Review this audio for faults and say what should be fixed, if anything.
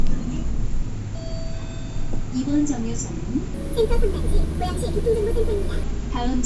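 From 3.54 s to 5.83 s the audio has a wrong sample rate fault: it runs 1.5 times too fast and about 7 semitones too high, with speed and pitch rising together. This fits 16 kHz material played back at 24 kHz with no rate conversion. On a spectrogram, every component in that stretch sits 1.5 times higher and the upper band edge jumps from about 8 kHz to about 12 kHz. On the waveform, transients and envelopes look squeezed in time. To prevent this, carry the true sample rate with the audio and resample whenever the playback rate differs.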